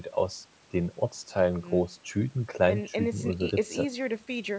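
Speech carried over a wideband call path whose 8 kHz band limit is normal for it, with no technical faults to report.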